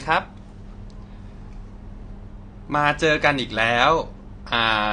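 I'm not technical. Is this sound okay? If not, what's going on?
No. The speech is dull and smeared from start to finish, with a warbly, fizzy edge on hiss-like sounds such as s and sh. Nothing is heard above about 9.9 kHz, so the crisp top end is missing. This is likely AAC compression set too low, which shrinks a file by discarding sound detail. It cuts off the highest frequencies.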